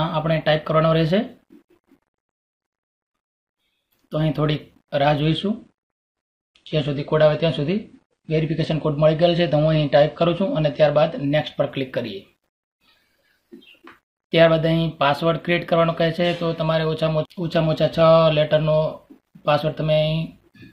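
An adaptive stream at a lower bitrate: from 5.26 s to 11.26 s the player appears to have fallen back to a cheaper encoding of the same stream, the kind of step down a slowing connection forces, and the sound points to a drop from roughly 96 kbit/s to about 32 kbit/s AAC. For those six seconds nothing is left above 9.8 kHz, so the audio turns dull and smeared with coding artefacts. Quality changes abruptly at both ends, with no gap in playback.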